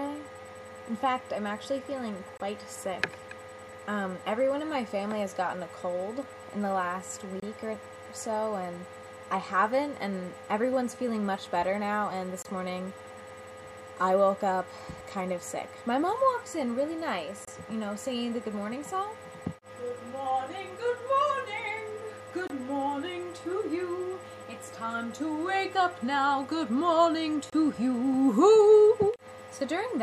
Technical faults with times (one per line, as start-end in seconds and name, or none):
2.37-2.40 gap between chunks
7.40-7.42 gap between chunks
12.42-12.45 gap between chunks
17.45-17.47 gap between chunks
22.47-22.50 gap between chunks
27.50-27.52 gap between chunks